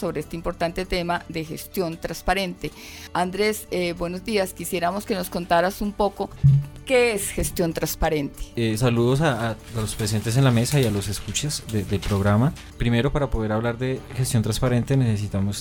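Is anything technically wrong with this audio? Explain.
No, nothing technically wrong can be heard here.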